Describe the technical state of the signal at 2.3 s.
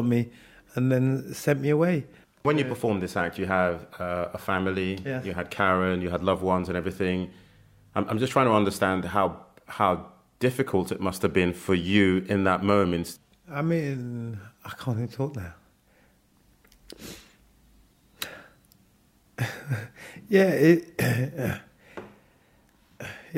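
At 2.3 s the signal is intact, with no audible dropout, distortion or other fault.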